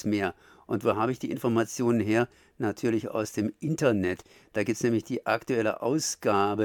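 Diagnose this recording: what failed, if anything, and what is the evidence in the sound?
No fault is audible here.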